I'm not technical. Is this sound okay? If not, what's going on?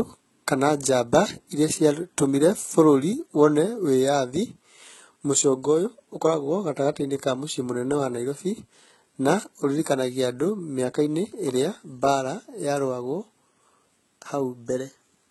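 No. All the way through, the speech's s sounds come out gritty and lispy, and the top end sounds fake. That's likely heavy HE-AAC compression, which rebuilds the treble by copying lower sound upward.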